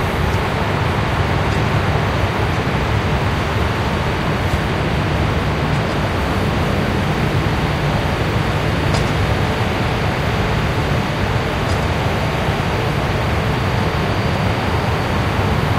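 No technical faults are audible.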